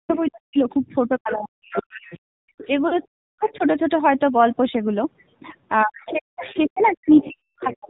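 The whole clip runs through the AMR narrowband mobile codec at 7.4 kbps, and the damage is plainly audible. Nothing above 4 kHz survives, and at that low bitrate the speech takes on a buzzy, synthetic edge, because the codec rebuilds it from a vocal-tract model and a few pulses rather than sending the actual waveform.

From 0.05 to 3.63 s you get speech suppressed in double talk. The talker keeps dipping or cutting out, by as much as about 40 dB, for roughly two seconds in total across that stretch. It sounds like the echo canceller likely heard both sides at once and turned everything down.

Over the same stretch the other side's voice leaks through. It comes in at 0.08 to 0.76 s at about 20 dB under the talker, at 1.73 to 2.63 s at about 15 dB under, and at 3.41 to 3.57 s at about 25 dB under. It's a faint second voice the canceller likely failed to remove from the loudspeaker pickup.

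At 2.88 to 2.99 s there are lost AMR speech frames. About 40 ms goes missing, which fits two dropped 20 ms frames. The decoder papers over the gap by repeating its last settings, so you hear a brief warbly dip.

The second half repeats the pattern. The other side leaks through again from 5.79 to 7.75 s at about 20 dB down. Speech is suppressed in double talk from 5.84 to 7.89 s, with drops up to about 40 dB covering roughly 1.5 seconds.

Inside that, from 7.28 to 7.40 s, more frames are lost: 200 ms spread over 280 ms, which fits about ten frames, with the longest run lasting 160 ms. That run is long enough for the concealment to stretch the sound and fade it to silence before the speech comes back rough.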